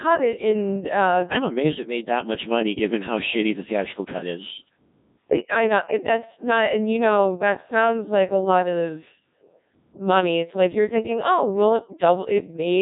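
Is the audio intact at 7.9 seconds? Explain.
No, a Codec 2 vocoder runs through the whole clip, including 7.9 s. The speech is resynthesised from pitch and envelope alone, so it sounds buzzy and robotic, with nothing above 3.8 kHz.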